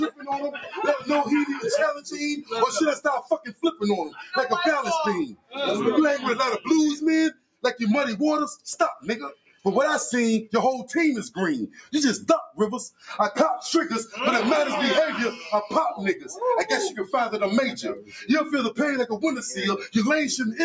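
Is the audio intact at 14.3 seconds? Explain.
No. At 14.3 seconds the audio pumps and thins, with sustained parts and tails sinking by around 10 dB while attacks get through. This is a noise suppressor applied to music or sounds, present throughout, treating steady tones and ambience as noise.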